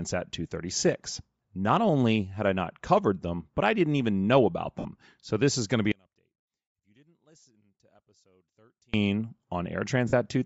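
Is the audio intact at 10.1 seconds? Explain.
No. Around 10.08 to 10.13 s, lost LE Audio frames, roughly 50 ms (about five 10 ms frames), were concealed by replaying the last spectrum with random signs, leaving a brief noisy smear. Throughout, the sound also has a plainly audible breathy, grainy edge, likely from Bluetooth LC3 compression at a low bitrate that fills the missing upper band with noise.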